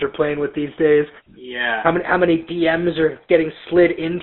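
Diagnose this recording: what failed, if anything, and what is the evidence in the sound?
GSM full-rate codec at the codec stage, fitting a 13 kbps stream: a pulse-driven vocal-tract model leaves speech band-limited to 200 Hz–3.6 kHz with plainly audible buzzy, gravelly roughness throughout.

The likely cause at the buffer stage is a drift correction step resetting the playback rate. From 1.95 to 4.20 s the speech runs 6.1% faster, raising pitch by about a semitone.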